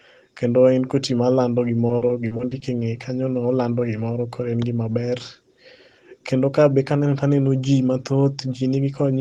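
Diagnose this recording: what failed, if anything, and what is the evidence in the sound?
The network stage failed, causing repeated packet loss (robotic sound) from 1.87 to 2.83 s, between "koti malando" and "kanyono olando gimoro koro". Short holes of up to 40 ms recur, and about a fifth of that stretch is patched by extending the previous sound. The result is choppy speech with pieces missing, heard through the call codec's band-limited, roughly 12 kHz-wide path.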